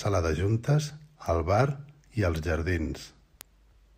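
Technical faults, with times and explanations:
1.26 s, 2.36 s and 3.41 s: bit error spikes. Each is a single corrupted sample in the speech. One flipped bit throws that sample's value up or down by a power of two, and the very next sample is back where it belongs. An isolated one-sample jump like that carries energy across the whole spectrum, so each is heard as a sharp tick that has nothing to do with the surrounding sound. The peaks reach about -22, -16 and -10 dBFS, so the ticks get louder from first to last.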